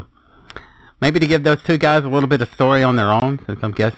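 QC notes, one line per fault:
Throughout: periodic clock jitter. The converter's sample clock is being wobbled at a steady rate of around 2 kHz, so every component of the speech picks up a pair of sidebands sitting that far above and below it. The higher speech frequencies carry the strongest sidebands, giving a rough, metallic edge to the sound. In the pauses there is nothing for the sidebands to ride on, so the roughness drops away there.
3.20–3.22 s: packet loss filled with silence. Straight after "bit of story on", the audio cuts out completely for 20 ms, which fits a single lost 20 ms packet. The receiver had no data for that stretch and played silence instead of concealing the gap. The signal drops to silence and returns abruptly, leaving a hole with hard edges.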